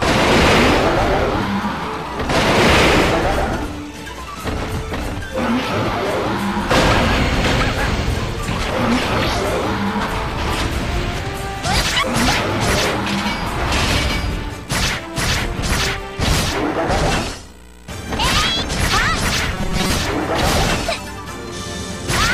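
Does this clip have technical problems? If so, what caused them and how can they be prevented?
Yes. From 19.54 to 19.94 s the sound turns into a rigid, metallic buzz at a fixed 188 Hz: robotic sound from repeated short buffers. The likely cause is that new audio arrived too slowly, so playback kept looping the last fragment, about 5.3 ms long, the period of a 188 Hz tone, while roughly half the real audio was skipped. Unlike codec warble, the buzz holds one steady pitch throughout. Enlarging the playback buffer or giving the audio thread higher priority would prevent it.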